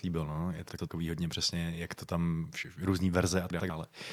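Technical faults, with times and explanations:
0.69–0.88 s, frames out of order: just after "líbil no je" and before "hodně přesně jak to", two adjacent blocks of about 96 ms each play swapped, which fits two runs of three short codec frames decoded in the wrong order, giving a garbled flutter. No time is lost.
3.51–3.70 s, frames out of order: right after "jak to tam různé", the same swap of two 96 ms blocks recurs, with the same flutter.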